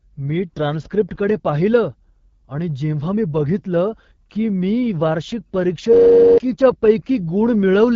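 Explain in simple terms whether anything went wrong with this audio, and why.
Yes, two things went wrong. Throughout, the voice sounds rough and raspy, with no crisp top end. That comes from heavy squeezing by the AMR wideband (HD Voice) codec running at a low setting.

From 5.93 to 6.38 s, right after "की मी वार्षिक परीक्षेत", the sound freezes into a steady buzz. This is a system hang loop: a tiny snippet, which fits a 512-sample buffer, repeats about 94 times a second while the computer stalls, and roughly half a second of audio is lost.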